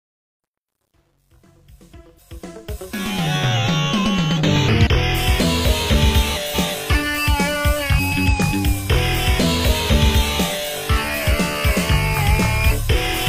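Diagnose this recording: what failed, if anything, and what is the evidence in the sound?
The fade-in from 0 to 3.35 s sounds gritty, worst before 2.26 s: truncation distortion on a fade, where a gain stage drops to roughly 10-bit steps with no dither.

Garbled flutter at 6.35–6.75 s and 7.98–8.28 s: frames out of order in the network or decode path, with halves of about 186 ms and 139 ms swapped.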